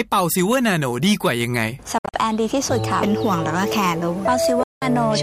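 At 1.98 s the sound breaks up into short holes, the longest 61 ms, about 122 ms of audio missing in all until 2.17 s. From 4.63 to 4.85 s about 183 ms of audio drops out. Each time the sound picks up further along, as though it kept playing. This is likely a Bluetooth dropout: packets reached the headphones too late and were discarded, leaving silence until good data arrived.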